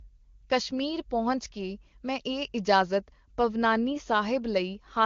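Nothing here stands out as a fault; the speech is carried over the AMR wideband (HD Voice) codec at its top rate of 23.85 kbit/s, where any trace of the coding is faint at most.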